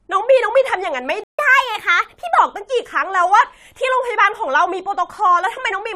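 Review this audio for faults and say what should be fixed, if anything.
At 1.24 s the speech cuts to silence for about 150 ms, resuming at 1.39 s: a playback stall, likely from the player running dry or its thread being blocked.

From 1.39 s to 2.38 s the speech runs at 1.15 times normal speed, raised by roughly two semitones, then settles back: catch-up at higher speed, resampling through the backlog. Tempo and pitch rise together, which separates it from pitch-preserving time-stretching.

A larger playback buffer and keeping the audio thread free of blocking work would prevent the stall, and with no backlog to recover, the sped-up catch-up would not occur.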